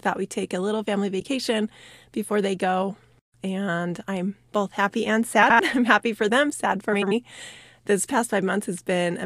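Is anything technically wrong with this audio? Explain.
Yes, frames out of order at 1.19–1.25 s, 5.42–5.60 s and 6.93–7.12 s: neighbouring blocks of about 42 ms, then about 93 ms, play swapped, giving a garbled flutter.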